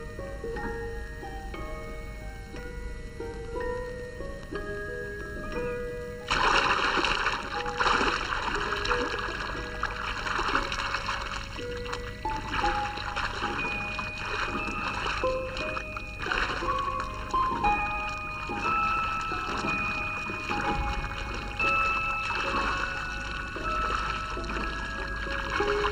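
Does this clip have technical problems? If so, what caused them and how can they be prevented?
Yes. One channel reaches the mix a little less than a millisecond behind the other, and the two channels are summed to mono, so there is channel delay (comb filtering) from start to finish. Because of the offset, frequencies where the two copies arrive out of phase cancel. The first notch falls at around 700 Hz, with further notches repeating at evenly spaced intervals up the spectrum. The result is a constant hollow, phasey colouring. To prevent it, align the channels, or check mono compatibility before downmixing.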